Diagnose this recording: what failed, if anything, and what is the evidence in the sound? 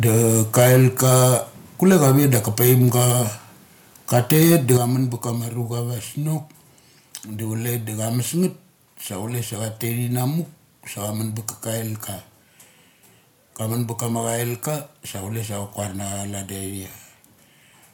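The front end is running hot. From 0.05 to 1.36 s, 1.85 to 3.11 s and 4.13 to 4.77 s the loudest syllables pick up a harsh, crackly edge, with peaks pushing roughly 7, 6 and 12 dB past full scale. A few percent of samples end up flattened. That's microphone overload at the converter stage. The input gain is likely set too high, so the waveform tops get sheared off at the ADC limit.

You can also hear the microphone volume stepped down, which is call-processing gain control reacting to those peaks. At 0.6 s the level dips by about 2 dB in one jump, mid-burst. At 4.77 s, right after the worst clipping and just before "kamun ba kama", speech and background both drop by about 7 dB at once. The call software likely lowered the device's input volume after detecting the overload.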